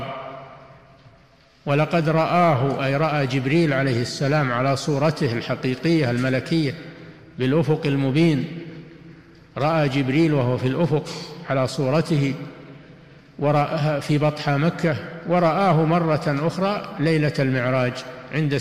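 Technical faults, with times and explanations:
Nothing technical stands out here; there's no fault to flag anywhere in the recording.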